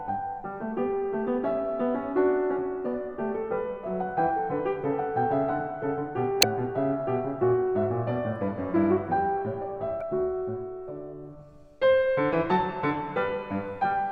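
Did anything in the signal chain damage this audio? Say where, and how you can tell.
Yes. Two brief glitches break into the audio, one from 6.39 to 6.45 s and another from 9.98 to 10.02 s, each lasting only about 50 ms. This is damaged data in a compressed stream, a fault at the codec or storage stage. Bytes in the encoded file were corrupted, so the decoder misread those frames and lost sync. It was disrupted until it found the next valid frame header and resumed.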